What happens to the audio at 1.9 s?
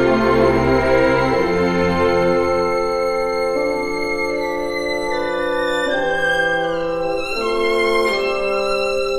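Nothing goes wrong at 1.9 s: the audio there plays through intact, with no dropout, click, distortion or other fault to be heard.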